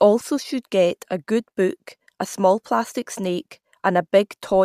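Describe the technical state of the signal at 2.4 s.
At 2.4 s the speech signal is intact, with no audible fault at that point.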